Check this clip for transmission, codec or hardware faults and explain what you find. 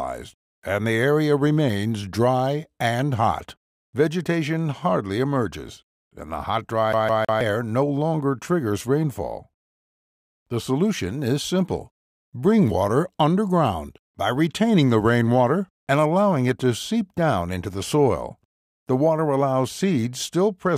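One fault: the CD stuck on one turn from 6.93 to 7.41 s. A scratch keeps knocking the laser back one track, so the same 161 ms slice plays three times, each jump marked by a short mute. That even, rapid stutter of identical slices sets it apart from a buffer dropout's silent gaps.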